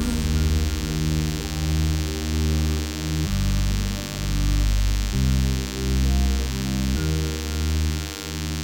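A steady, thin buzz with a dense stack of harmonics sits under the sound for the whole clip, around 10 dB below it. This is DECT cordless phone buzz: a nearby handset or base station's radio bursts, repeating at 100 Hz, are being rectified by the audio circuitry.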